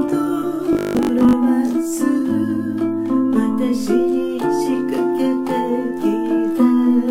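From 0.73 to 1.33 s, new audio is likely arriving too seldom, so the playback side keeps looping the last short buffer and skips most of the real signal in between. Each repeat lasts 20 ms, which stamps a fixed 50 Hz buzz over the sound. This is robotic sound from repeated short buffers: for that stretch the audio becomes a rigid, metallic drone that only loosely tracks the underlying material.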